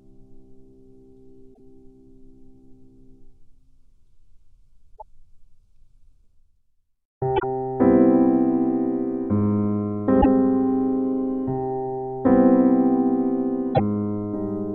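The audio is marked by damaged data in a compressed stream: five brief glitches at 1.50, 4.93, 7.36, 10.18 and 13.70 s, each about 0.08 to 0.1 s long, where the decoder misreads corrupted frames and resyncs. These show as short vertical smears on a spectrogram and sharp waveform discontinuities.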